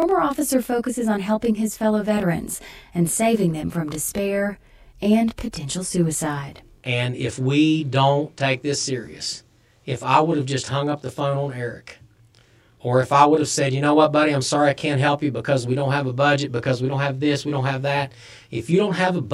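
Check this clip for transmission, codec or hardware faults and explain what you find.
There's one fault, running through the whole speech clip. Channel delay causing comb filtering: one channel lags the other by roughly 20 ms, and summing to mono cancels evenly spaced frequencies, starting around 20 Hz, so the speech comes across rough and slightly doubled from start to finish.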